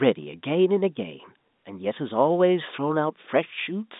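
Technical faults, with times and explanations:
No technical faults are audible anywhere in this recording.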